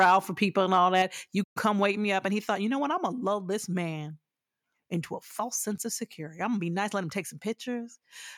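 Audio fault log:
0.00–0.15 s and 0.74–1.02 s, microphone overload: peaks are flattened with a harsh, crackly edge, first before "for people and" and again right after it. The likely cause is input gain set too high, so the converter ran out of headroom: about 5 dB over with roughly 4% of samples clipped at first, then about 2 dB over with well under 1% clipped.
1.02 s, microphone volume stepped down: immediately after the second distorted peak, the voice and the background both drop by about 4 dB at once, not in a gradual fade. The likely cause is the call software detecting clipping and cutting the device's input volume in a single step.
1.43–1.57 s, playback stall: the sound breaks off mid-flow into about 120 ms of silence, then resumes with "come wake". The gap is most likely the player running out of data or having its output thread blocked until it could feed the device again.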